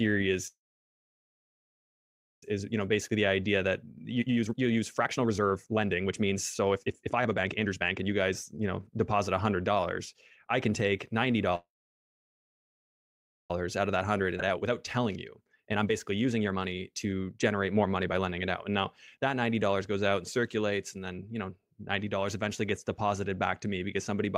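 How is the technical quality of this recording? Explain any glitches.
The technical quality is poor. Repeated network-timing faults interrupt and distort the speech's pacing.

A call audio freeze occurs twice, from 0.47 to 2.43 s and from 11.55 to 13.51 s. Each lasts almost two seconds: a brief fading tail of the last sound, then silence. When the speech returns it continues exactly where it stopped. The likely cause is delayed packets emptying the jitter buffer. Unlike a skip, nothing is lost.

A jitter buffer speed-up follows each freeze. The first runs from 2.63 to 11.55 s at 122% speed, about two seconds removed. The second runs from 13.66 to 19.43 s at 116% speed, about one second removed. The receiver trims tiny pitch-period slices to shed the backlog, so speech sounds hurried but keeps its normal pitch.

A skip ahead happens at 14.37 to 14.40 s, inside the second speed-up. Roughly a second of speech is dropped and the two sides are joined almost seamlessly. 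Unlike the freezes, there is no pause. Content simply vanishes as playback jumps forward.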